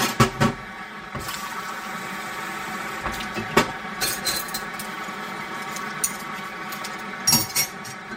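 Channel delay (comb filtering) runs throughout. One channel arrives roughly 5 ms late and mono summing cancels evenly spaced frequencies from around 100 Hz, leaving the sound hollow and phasey.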